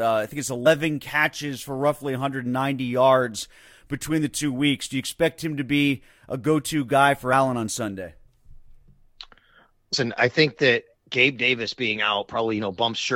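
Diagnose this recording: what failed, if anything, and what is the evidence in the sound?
At the codec stage, compressed frames were skipped: whole frames never reached the decoder output, so the speech jumps ahead, losing about a tenth of a second at 0.65 s and 9.92 s and roughly 50 ms at 7.32 s.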